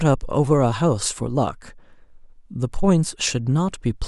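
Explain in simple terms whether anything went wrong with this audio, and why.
Nothing went wrong here, as the speech shows no audible technical fault at any point, so there is nothing to fix.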